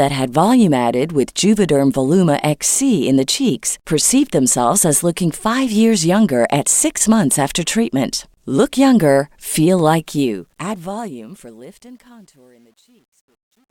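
Speech with a fade-out that starts around 10 s, just after "younger feel", and runs to the end at 13.70 s. The fade shows truncation distortion on a fade from 10.06 s onward. The gain stage appears to drop the low-order bits without dither, which fits a 10-bit path. As the level falls, the waveform coarsens into steps. From 11.41 s to 13.71 s the tail turns gritty.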